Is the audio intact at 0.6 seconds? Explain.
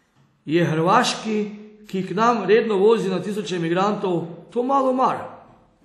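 No. At 0.6 seconds, as throughout the clip, the speech carries plainly audible WMA compression damage, likely from a WMA 1 encode. Nothing sounds above 13.2 kHz. Coarse quantisation, consistent with roughly 48 kbps, smears noise across long blocks, giving a ringing, washy hiss.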